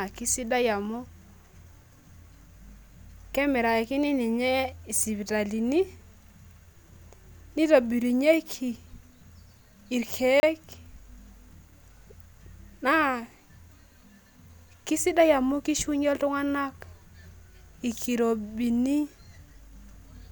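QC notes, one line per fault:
10.40–10.43 s: block of digital silence, a 30 ms run of silence with hard edges, heard as a brief hole.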